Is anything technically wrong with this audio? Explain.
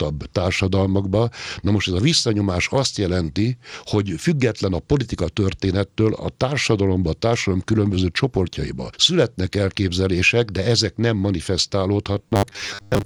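Yes. From 12.13 s to 13.05 s the speech becomes a rigid, metallic 100 Hz buzz. This is robotic sound, likely from repeated short buffers: a 10 ms segment keeps repeating while about half the real audio is skipped. A spectrogram shows evenly spaced 100 Hz harmonic lines, and the waveform shows identical 10 ms cycles.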